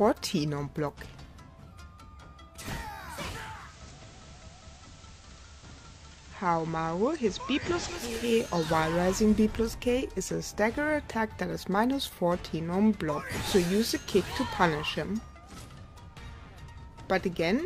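At 3.35 s the receiver drops its digital stream and blends to analogue FM, the classic digital radio blending to analogue. The crossfade takes about 0.45 s, and then you're on FM: everything sits about 3 dB quieter, and there's a steady hiss roughly 25 dB under the sound. At 8.30 s it blends back to digital, and the hiss goes away.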